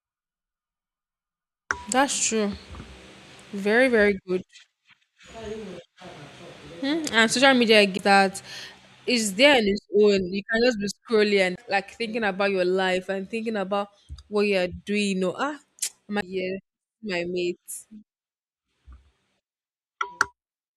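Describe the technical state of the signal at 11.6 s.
Right there you've got a CD skip, from 11.56 to 11.58 s, after "just be scrolling and". The laser jumped to a different turn of the spiral, so playback mutes for roughly 20 ms, then resumes elsewhere at "like thinking about your".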